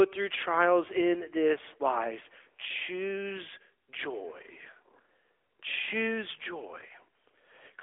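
AMR narrowband mobile codec throughout: the speech is squeezed into a phone band with nothing above 3.7 kHz, and a plainly buzzy, synthetic texture fits a 10.2 kbps mode.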